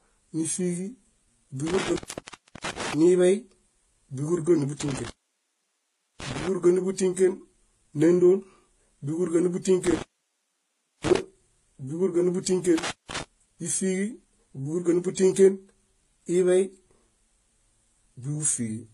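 Across the whole speech recording, nothing survives above 12.4 kHz, and the sound carries a mix of smeared, watery swirls and a hollow, metallic sheen in the highs. The likely cause is transcoding between lossy codecs: a low-rate first encode, then further lossy passes, each adding its own artefacts on top of earlier damage. On a spectrogram this shows as a hard ceiling at 12.4 kHz, with blotchy, patchy high-frequency energy below it.

From 1.67 to 2.94 s, 4.81 to 6.48 s, 9.86 to 11.19 s, and 12.78 to 13.23 s, the signal drops out with an intermittent contact fault, where a loose connection briefly opens the line. Each dropout is bracketed by crackle. The open stretches last about 0.68 s, 1.11 s, 1.02 s, and 0.19 s, leaving only faint hiss. In the waveform these appear as near-flat gaps edged by sharp spikes, and on a spectrogram as broadband vertical clicks framing low-level noise.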